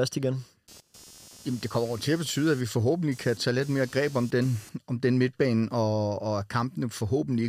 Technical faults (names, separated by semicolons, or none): computer activity noise